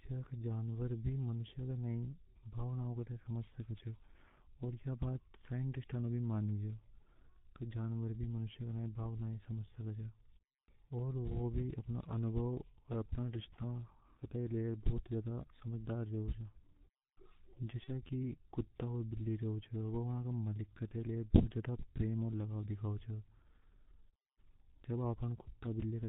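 Speech runs throughout through a heavily degraded G.723.1 codec at 6.3 kbit/s. Nothing above 4 kHz gets through, so the sound is muffled and hoarse. The coarse 30 ms frame updates smear consonants into a blurred, rasping texture. VoIP packet loss concealed by the speech codec appears at 17.84–17.90 s. About 30 ms of signal is missing, consistent with a single lost frame. The decoder extrapolates the preceding pitch and filter at falling gain, producing a brief buzzy or noisy smear, and the speech stays weak or distorted for tens of milliseconds or more afterward.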